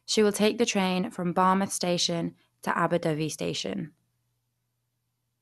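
Speech with plainly audible MP2 compression damage throughout: the sound is dull, with nothing above about 12.1 kHz, and a gurgling, granular texture as upper sub-bands drop out and the rest are coarsely quantised. This points to a low bitrate, likely around 80 kbps.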